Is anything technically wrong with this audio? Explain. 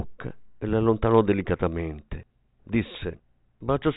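No, nothing is technically wrong with this audio.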